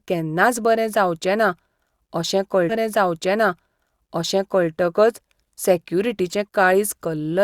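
At 2.69 s a stream segment is repeated: the player queued the same two seconds twice, so the speech from 2.69 to 4.69 s plays again, with a small blip at the jump back. On a spectrogram, an identical 2.0 s pattern appears twice, split by a thin vertical broadband line.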